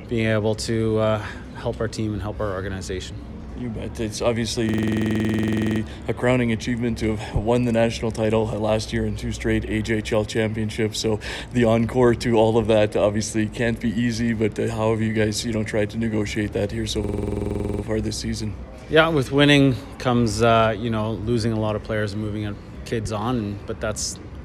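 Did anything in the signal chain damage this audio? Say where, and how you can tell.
Yes. At 4.69 to 5.81 s and 17.04 to 17.83 s, one 46 ms slice repeats exactly, 24 then 17 times, a machine-gun stutter at 21.5 Hz. This system hang loop sits at the driver or buffer stage: the system froze while hardware kept replaying its ring buffer, consistent with a 2048-sample buffer.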